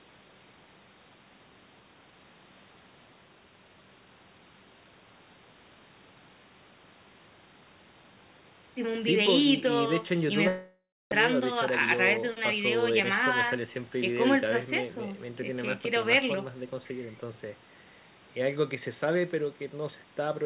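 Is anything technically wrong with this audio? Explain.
Yes, two things. From 10.48 to 11.13 s the sound smears into a fading buzz, then drops to near silence for a moment before resuming with about half a second gone. That's likely a long network dropout, with the receiver stretching the last audio until it ran out.

Right after, from 11.38 to 13.68 s, a jitter buffer speed-up kicks in: playback runs about 5% fast at unchanged pitch, sounding slightly hurried, as the buffer trims tiny pitch-period slices to shed roughly 150 ms of built-up delay.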